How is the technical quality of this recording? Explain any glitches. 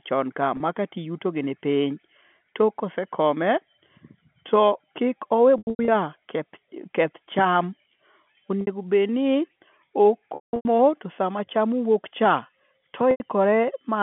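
The recording has repeated dropouts from packet loss with pitch repetition, heard through a narrow telephone band (roughly 150 Hz to 3.4 kHz) that fits G.711 coding. Losses occur at 0.57 s, 5.58–5.88 s just after "to kik owe", 8.61–8.67 s, 10.35–10.65 s just before "to sama", and 13.11–13.20 s. The receiver fills each gap by looping the last pitch period, so the 30 to 90 ms losses sound like a briefly held, buzzy tone. The two 0.3 s stretches are scattered losses with held runs of up to 180 ms, which fade toward silence before the speech cross-fades back. The gaps fit 30 ms packets.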